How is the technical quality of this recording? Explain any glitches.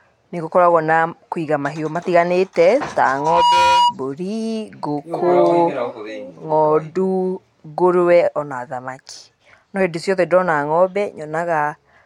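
There's one clear glitch, a loudspeaker feedback squeal. Right after "kũiga mahiũ matiganĩte ta", from 3.08 to 3.95 s, a 965 Hz tone swells over roughly 0.4 s to sit a few dB above the speech. The mic is picking up its own speaker and the loop runs away at that pitch.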